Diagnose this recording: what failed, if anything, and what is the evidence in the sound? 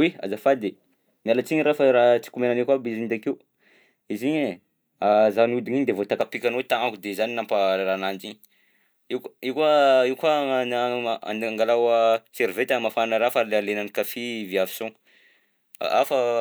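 Pre-emphasis left on, from 6.21 s to the end. The speech suddenly turns thin, bright and hissy there. Sibilants jump forward and the low body drops away. The treble sits about 11 dB above the 1 kHz level at 10 kHz. The shape fits a J.17 curve. The failure is at the receiving or decoding stage. The link boosted the highs before transmission, but the matching de-emphasis filter was never applied afterwards.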